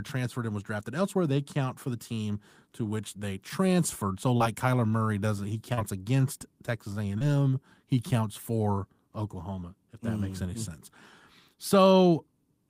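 Speech with four brief smears or wobbles, at 4.37–4.42 s after "which they transferred so", 5.74–5.79 s after "kyler murray doesn't he", then 6.39 and 7.19 s. Each is short concealed packet loss: 20–40 ms of audio arrived too late, and the decoder extended the preceding sound to bridge it.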